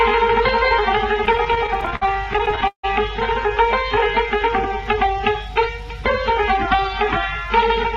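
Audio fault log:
1.25–2.85 s: repeated stalls (stutter). Twenty short halts where the receiver stretches the preceding sound, up to 158 ms, about a quarter of this span, as late packets empty the jitter buffer. Nothing is lost, unlike dropouts; the audio only drags and stutters.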